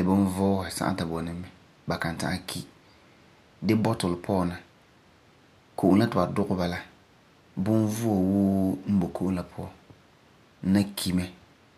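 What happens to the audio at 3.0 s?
Nothing goes wrong at 3.0 s; the speech runs through that point intact, with no dropout, click or distortion.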